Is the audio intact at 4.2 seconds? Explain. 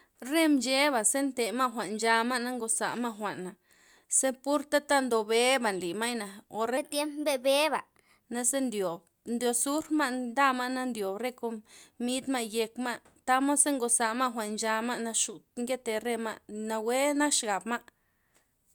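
Yes, the audio is intact at 4.2 seconds, with no audible fault at that moment.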